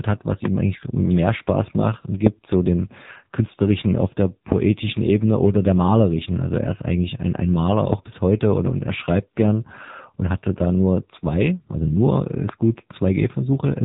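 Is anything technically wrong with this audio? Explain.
Yes. Throughout, the speech carries AMR narrowband mobile codec damage: nothing passes above 3.8 kHz, and the heavy buzzy, synthetic texture fits a low AMR-NB mode near 6.7 kbps, starving the vocal-tract model of pulses. Plain band-limiting would dull the sound without that buzz.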